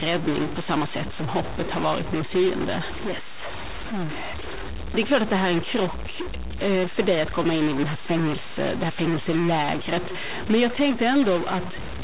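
A stuck bit runs through the whole speech clip, most likely one data bit held at a fixed value in the converter or a data line. Samples jump by that bit's weight in a waveform-dependent pattern, giving distortion, and the pauses fill with noise instead of falling silent.

Clock drift between sender and receiver is also present throughout, with the sender's clock running roughly 4 percent fast. Audio arrives faster than it is played out, so the jitter buffer keeps filling and the receiver has to throw away short pieces to keep its delay in check. The result is small, unevenly spaced timing hiccups across the clip.

Repeated timing corrections can be traced from 0.10 s to 11.99 s, amounting to a playback rate of 104 percent. Each correction removes a short slice, always in the same direction, at irregular intervals. The slices are tiny, so they come through as faint skips and a slightly hurried, uneven pace. 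This all sits on a call path band-limited to nothing above 4 kHz, consistent with G.711 mu-law at 64 kbps.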